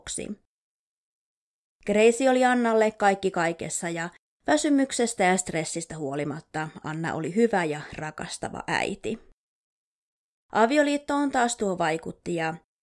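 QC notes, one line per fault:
No fault to note.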